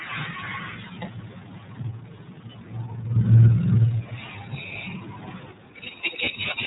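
Speech, coded with the iLBC codec throughout. Nothing passes above about 3.8 kHz, so the sound is narrowband and dull. The codec damage is plainly audible. Voiced sounds turn rough and slightly synthetic. Each frame's excitation is coded on its own, without help from the frame before. The texture fits 30 ms frames at roughly 13 kbps, the lower iLBC mode.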